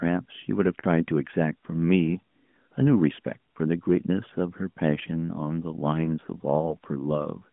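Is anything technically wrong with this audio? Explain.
Yes. Lost AMR speech frames occur at 0.80 to 0.85 s and 6.66 to 6.69 s. Damaged frames were concealed by repeating earlier pitch and vocal-tract settings at falling gain, heard as brief dips or warbles. The first gap, about 40 ms, fits two 20 ms frames, within narrowband AMR audio limited to roughly 150 Hz to 3.5 kHz.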